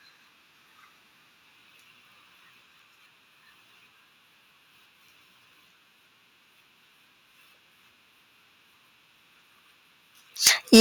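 Right at the tail end, from 10.46 s to about 10.8 s, the speech picks up a harsh, crackly edge on its loudest syllables. That's microphone overload, likely from the input gain being set too high, with peaks pushing about 16 dB past the converter's ceiling and roughly one sample in twenty getting flattened. Then at 10.76 s, inside that distorted stretch, the voice and background both drop by about 2 dB in one go. That's the microphone volume stepped down, likely the call software reacting to the clipping by lowering the device's input level in a single step.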